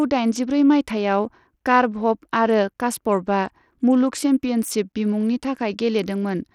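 From start to finish the speech carries Bluetooth SBC compression, likely at a low bit pool: treble flickers and drops out, with gritty noise riding underneath, which fits a stream around 80 kbps.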